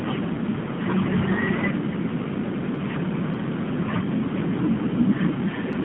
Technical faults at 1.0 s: AMR narrowband mobile codec

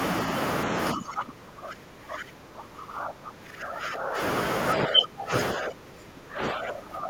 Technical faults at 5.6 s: speech suppressed in double talk

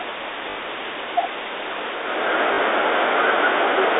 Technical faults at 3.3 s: none

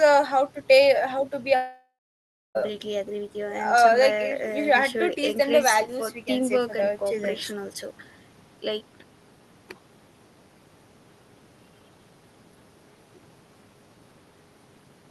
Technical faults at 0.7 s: none

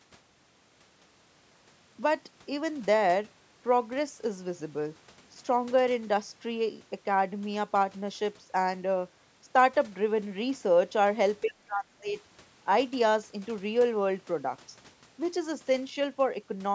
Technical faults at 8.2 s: none

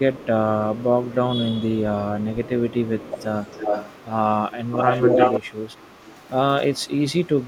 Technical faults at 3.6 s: echo leak

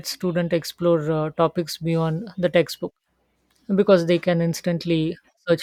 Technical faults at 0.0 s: none

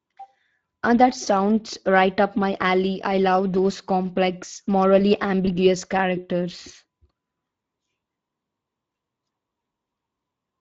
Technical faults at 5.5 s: Speex codec; VoIP packet loss concealed by the speech codec

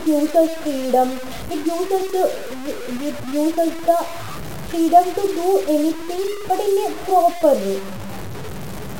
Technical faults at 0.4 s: low bit depth without dither

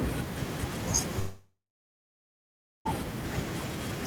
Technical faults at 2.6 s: long network dropout

